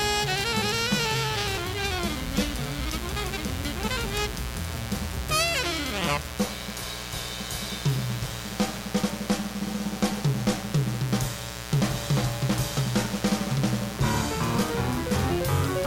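A steady, raspy mains buzz runs throughout, fairly loud against the audio: switching spikes at twice the 60 Hz mains rate leaked in, spraying harmonics into kilohertz.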